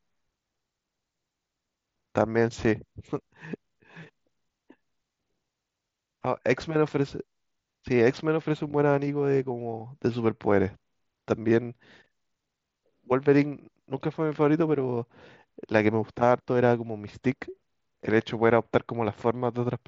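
No technical faults are audible in this speech.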